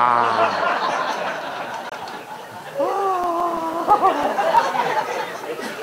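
The audio cuts out from 1.89 to 1.92 s, a gap of about 21 ms that fits a single lost packet, likely a Bluetooth dropout after which the sound resumes as if it had played on. From 2.74 to 4.73 s, 13 regular CD scratch ticks occur at roughly 6.5 per second, the longest only a few milliseconds, where the player interpolated or muted data the error correction could not rebuild on each turn of the disc.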